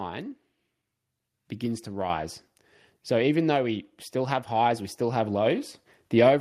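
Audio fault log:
2.1 s, microphone volume stepped up: the input level of the speech and the background noise rises together by about 5 dB in a single step and stays there. This fits the call software judging the microphone too quiet and raising the device's input gain. It sounds like the talker abruptly moving closer, with the room noise jumping too. On the waveform the envelope widens at once. On a spectrogram every frequency band brightens at the same instant.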